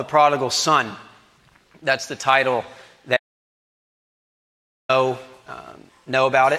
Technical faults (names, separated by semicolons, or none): audio dropout to silence